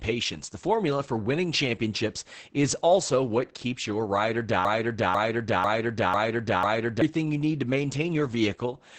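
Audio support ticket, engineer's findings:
Opus voice compression, whole clip: SILK speech coder at a rate that points to about 10 kbps, wideband, 20 ms frames. Heavy codec damage: nothing above 8.7 kHz, excitation coarsely coded, so speech is muffled, hoarse, somewhat robotic.

Broken-record loop, 4.65 to 7.02 s: likely a stall in player, encoder or stream, resending its last held fragment. After "keeps your ride or", a 0.5 s piece repeats exactly 5 times; the speech due there is lost until "you need to".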